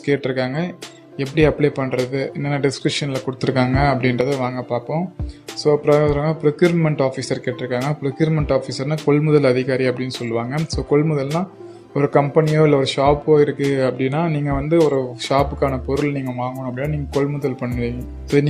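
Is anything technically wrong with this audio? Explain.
Yes. From 3.42 to 4.21 s there is a sudden gain jump, likely a digital gain step applied without a ramp; sound and background noise leap about 6 dB together.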